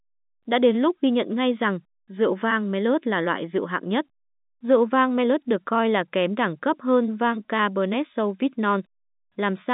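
Nothing goes wrong anywhere in this speech, which comes over the ordinary G.711 telephone coding path with its narrow band of roughly 200 Hz to 3.7 kHz and nothing audible above about 3.8 kHz.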